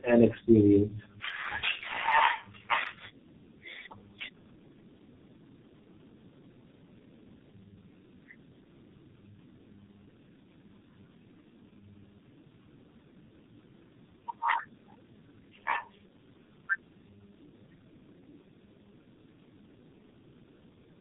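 Speech with tandem speech coding throughout: two low-rate speech codecs in series, likely AMR-NB then G.723.1, stack rough, muffled, warbly artefacts, and a spectrogram shows smeared formants under a hard 3.7 kHz ceiling.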